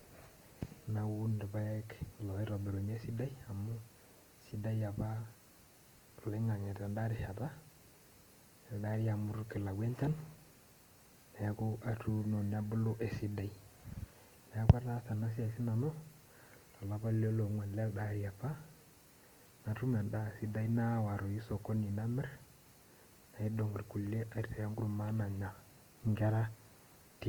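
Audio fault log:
throughout Opus compression: the speech sounds grainy, rough and noisy, with content reaching about 20.1 kHz. This is likely Opus music mode, at roughly 24 kbps.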